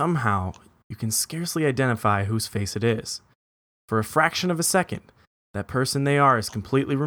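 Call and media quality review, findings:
Nothing to flag on this one; the speech comes through without any audible glitches, dropouts or level problems from the first word to the last.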